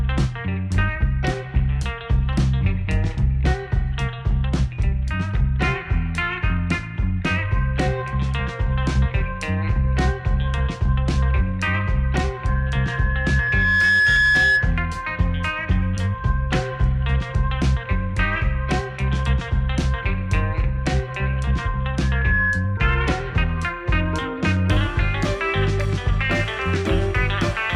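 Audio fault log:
12.47–14.80 s and 22.01–22.77 s, loudspeaker feedback squeal. A 1.7 kHz tone swells over about a second and a half, then briefly in a fraction of a second. The microphone hears its own loudspeaker. At that frequency the loop gain passes one, so the tone feeds itself.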